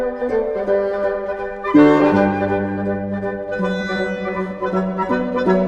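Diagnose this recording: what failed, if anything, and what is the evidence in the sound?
Listening closely, nothing in the recording stood out as a failure at any stage of the chain.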